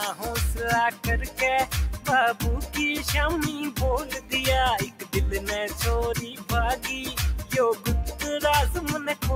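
The whole way through, a speech-tuned noise suppressor is working on this sound, mistaking steady, sustained material for noise and pulling it down by up to around 10 dB. The level keeps swinging, so the audio pumps and thins as held parts sink while sharper onsets slip past.

Sounds cut by the noise suppressor show up at 0.91 to 1.06 s, 4.04 to 4.33 s, 4.85 to 5.15 s and 6.22 to 6.51 s. In each stretch the suppressor clamps down by about 9 dB, so the sustained portion dips or its tail gets chopped short.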